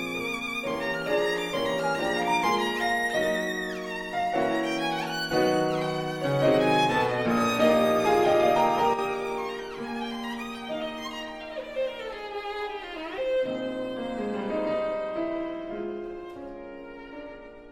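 The audio has a brief level dip from 8.94 to 8.99 s, falling by about 6 dB. This is likely one channel dropping out before the mono sum.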